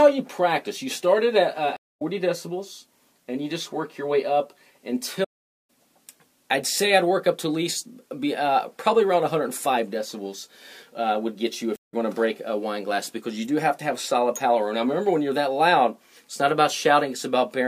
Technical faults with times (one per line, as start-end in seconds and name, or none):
1.76-2.02 stream reconnect
5.24-5.70 playback stall
11.76-11.94 stream reconnect